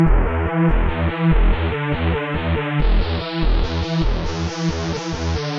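No technical faults can be heard anywhere in the recording: the signal holds steady with no interruptions, distortion or level problems at any point.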